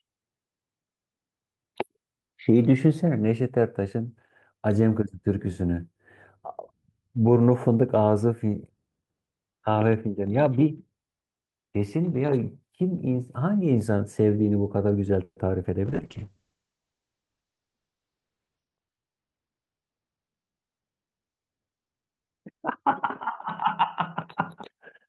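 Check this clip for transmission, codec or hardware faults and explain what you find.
Four transmission faults turn up in this speech clip, all within its final ten seconds.

At 15.23 to 15.38 s there is a call audio freeze. The last sound is stretched into a fading buzz for about 130 ms, including roughly 50 ms of silence, and then the speech resumes where it stopped. The likely cause is delayed packets draining the jitter buffer, which adds 130 ms of delay but loses nothing.

At 15.62 to 15.65 s comes short concealed packet loss. About 30 ms of audio never arrived, and the receiver covered 10 ms of it by extending the preceding sound. The result is a brief smear where about 20 ms of speech is gone.

From 15.87 to 24.62 s there is a call bitrate drop. The encoder falls from 32 kbps to 7 kbps, bottoming out for 2.9 s, and coded bandwidth narrows from 20 kHz to 6 kHz. Speech turns muffled and rough, losing its upper frequencies until the rate recovers.

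Between 17.30 and 18.26 s a jitter buffer speed-up plays the audio at 111% speed. The receiver trimmed pitch-period-sized pieces to shed excess buffered delay, about a tenth of a second in total, so the speech sounds hurried while its pitch is unchanged.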